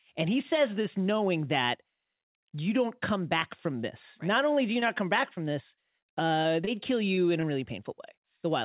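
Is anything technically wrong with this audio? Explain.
Yes, there's short concealed packet loss, seven times in the second half: at 4.8, 5.36, 5.75, 6.43, 6.65, 7.15 and 7.41 s. Each time a chunk of audio arrived too late to decode. The gaps fit 20 ms packets. The receiver papered over each hole by stretching the preceding sound for a few hundredths of a second, then crossfading back. You hear it as quick little smears or wobbles, and a short consonant can get swallowed. The band-limited sound, with nothing above 4 kHz, points to a G.711 mu-law call path.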